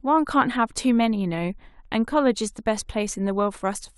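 Nothing in this bit of speech points to a technical fault, so there's nothing here to flag.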